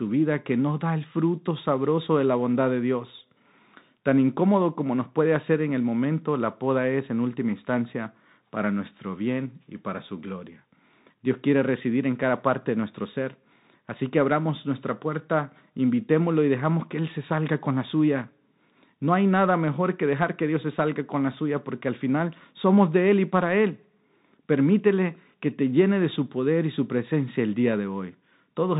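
Throughout, the speech is dull, with scratchy s sounds over granular hiss: a Bluetooth CVSD headset codec, its one-bit steps passing nothing above 4 kHz.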